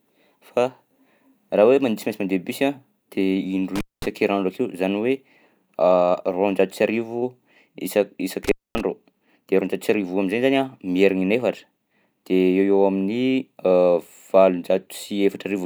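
At 3.76 to 4.06 s and again at 8.44 to 8.81 s, the speech cuts out for about 0.21 s and 0.24 s from intermittent contact, a loose connection briefly opening. Crackle at each edge and faint hiss inside set it apart from clean digital dropouts.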